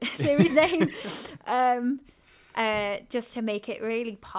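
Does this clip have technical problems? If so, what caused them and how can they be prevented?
No, there are no technical problems to report in this speech clip. Nothing in it calls for a cause or a fix.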